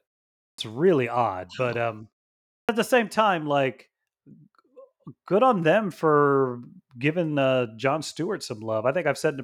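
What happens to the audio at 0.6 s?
The output device slept through the half-second of silence at the start and needed time to wake, so this is a clipped start after a pause: from 0.49 to 0.58 s about 93 ms is swallowed, and "really odd but um" bursts in abruptly, missing its opening sounds.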